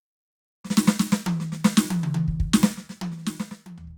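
From 2.68 s to the end, the music carries zipper noise: the level drops by roughly 20 dB in unsmoothed 2 dB steps, about seven a second, and each jump leaves a small click, so you hear a ticking zip riding on the fade.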